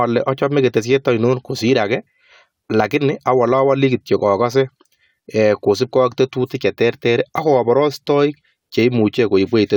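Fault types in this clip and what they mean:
No technical faults are audible.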